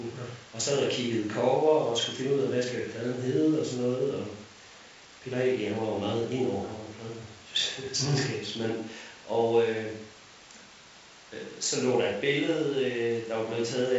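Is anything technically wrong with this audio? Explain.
No, nothing's wrong here: the speech comes through as ordinary G.722 wideband telephone audio at 64 kbit/s, with the band simply ending around 7.7 kHz as that coding does.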